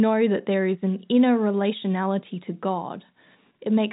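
Nothing is technically wrong with this speech clip; it carries the band limit of G.711 telephone coding, with no content above about 3.8 kHz.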